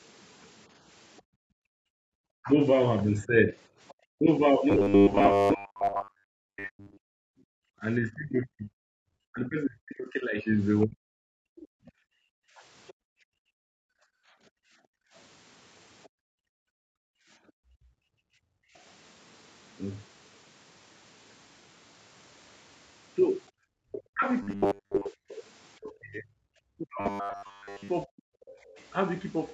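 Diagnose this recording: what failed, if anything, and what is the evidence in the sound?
Other side's voice leaking through, call processing: faint far-end sound, well below the talker, at 1.16–3.94, 8.44–12.94, 16.03–16.09 and 28.61–28.85 s, likely residual loudspeaker echo the canceller missed.

Background gated by the echo canceller, call processing: room sound drops by about 38, 37, 28 and 18 dB at 1.22–2.14, 7.14–18.74, 23.51–23.57 and 28.55–28.74 s while the loudspeaker plays.

Speech suppressed in double talk, call processing: the talker dips or breaks up, by up to around 40 dB, across 2.42–12.06 and 23.85–28.27 s, likely as the canceller attenuates both overlapping sides.

Robotic sound from repeated short buffers, buffer stage: a rigid 100 Hz metallic buzz at 4.7–6.97, 24.43–25.09 and 27.01–27.89 s, which fits a 10 ms block looped while real audio is skipped.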